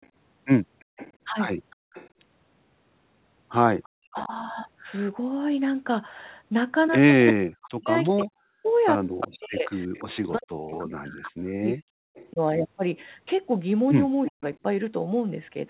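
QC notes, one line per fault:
0.02–2.09 s, 3.83–4.27 s, 7.27–12.31 s and 14.25–14.32 s, echo leak: A delayed copy of the speech trails the talker by 346 ms. It is well below the speech at first and grows louder toward the end. A loudspeaker echo the far-end canceller did not fully remove is the likely cause.
1.76–1.92 s, background gated by the echo canceller: The room sound drops out for about 150 ms, sinking by about 33 dB, then returns. The canceller clamped the microphone while the loudspeaker played, and the background comes back when it releases.
3.96–4.32 s, 7.32–12.4 s and 14.3–14.43 s, speech suppressed in double talk: The talker's level dips in pieces, by roughly 40 dB at the deepest, over about 3 s in the long stretch. Both sides were talking at once, and the canceller likely turned everything down to fight the echo.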